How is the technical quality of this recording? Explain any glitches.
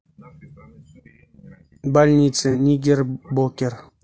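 Technical quality is fair, with coding damage throughout and one brief dropout.

The whole speech clip sounds rough and grainy, with hiss between harmonics and a thin, synthetic top. It's likely low-delay AAC compression at around 32 kbps, where short frames blur pitch detail.

At 2.51 to 2.56 s there's a smeared, noisy patch from AAC frame loss with concealment. The decoder patched about 30 ms, probably a single frame, from the previous spectrum.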